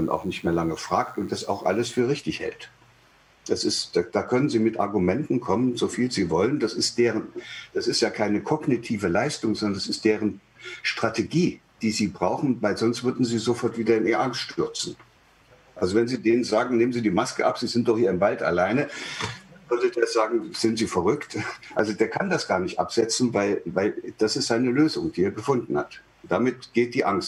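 From the start to 2.0 s, a DECT cordless phone buzz sits beneath the sound, roughly 35 dB below it. A nearby handset or base transmits a short radio burst every 10 ms, and the audio circuitry rectifies these pulses, producing a thin, rasping buzz repeating at 100 Hz. Unlike 100 Hz mains hum, which is smooth and rounded, this is thin and edgy, and the buzz stops at 2.0 s.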